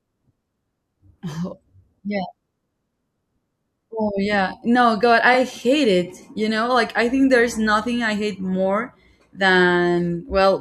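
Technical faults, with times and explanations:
5.33–5.35 s, repeated frames: a short stretch of the speech, about 21.3 ms long, plays twice in a row, causing a brief stutter. The length matches a single compressed frame written or sent twice, which the decoder then played again, so the clip gains 21.3 ms at this point.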